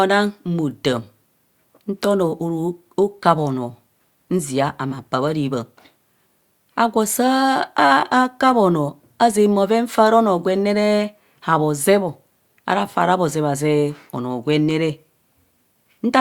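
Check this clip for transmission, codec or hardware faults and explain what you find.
No faults turn up anywhere in the clip.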